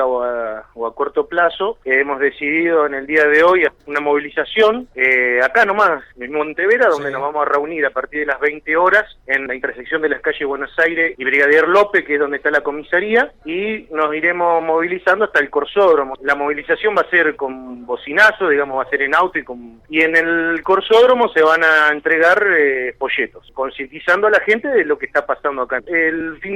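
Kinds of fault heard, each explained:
Skip ahead: At 3.67 s the audio jumps forward with no gap and nothing filling it. About a second of sound is simply missing. The material before and after the cut is butted together almost directly, so the flow breaks abruptly. This happens when a run of audio is thrown away while later audio is already queued. Here the playback delay shrinks by about a second in one step.
Jitter buffer speed-up: From 5.32 s to 10.04 s the audio plays at about 109% of normal speed. The pitch does not change. The receiver had more audio waiting than its target. To catch up, it cut out many tiny slices, each one or a few pitch periods long, one after another. Around 0.4 s is removed in total. The passage sounds hurried and rushed, then settles back once the buffer reaches its target.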